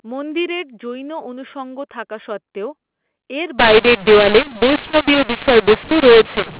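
From 3.59 s to the end, the speech turns harsh and gritty, levels jump unevenly and pauses fill with hiss. This is mu-law and A-law mixed up: mu-law G.711 telephone audio decoded with the A-law curve, which remaps every sample's level.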